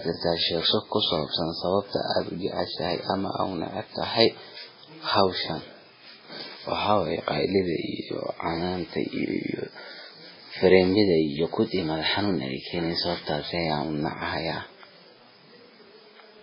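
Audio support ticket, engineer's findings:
Whole clip: watery, swirly speech, smeared s sounds; likely MP3 compression, very low bitrate. Spectrogram: hard ceiling near 5.3 kHz, flickering holes where weak lines drop out.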